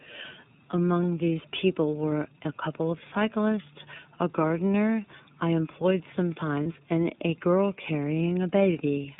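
Throughout, the speech passes through the iLBC codec, whose narrowband line keeps only about 150 Hz to 3.7 kHz; the plainly audible rough, synthetic edge fits its 13.33 kbps, 30 ms frame mode. From 6.63 to 6.66 s, lost iLBC frames (a 30 ms gap fitting one dropped frame) were filled by repeating the last pitch cycle, heard as a brief buzzy held vowel before the voice snaps straight back.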